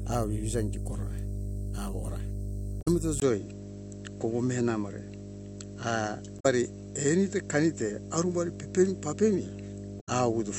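A steady 50 Hz mains hum runs through the whole speech, strong and only a little below the voice. Its fixed pitch separates it from rumble or wind. At 2.78 to 2.88 s, damaged data in a compressed stream makes a brief glitch as the decoder loses sync and searches for the next frame. This is unlike a plain dropout, which would be silent. From 3.20 s, after a 20 ms gap, the sound turns duller and nothing above 7.8 kHz remains, with a faint new noise floor well below the speech and no level change. This likely comes from the input being switched to a poorer device, since a gradual filter would not produce such an abrupt change. The same compressed-stream damage returns at 6.36 to 6.46 s and 9.97 to 10.09 s as short blips.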